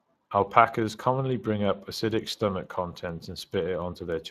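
Throughout, the speech carries plainly audible Speex codec damage: a noisy, hoarse grain from coarsely coded excitation, fitting about 22 kbps, unlike transform-codec swirl.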